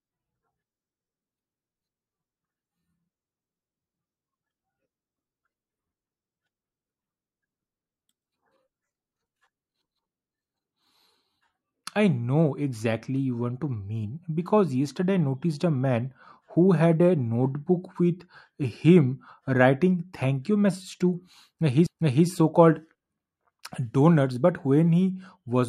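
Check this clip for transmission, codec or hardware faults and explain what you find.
One hardware fault is present, a CD skip at 21.86 s. The speech is broken by a tiny tick, a near-silent gap of a couple of milliseconds, and then the sound carries on from a different point, so the flow jumps abruptly. This happens when a knock or a flaw on the disc throws the laser onto another turn of the spiral. The player mutes briefly and resumes reading from the wrong place.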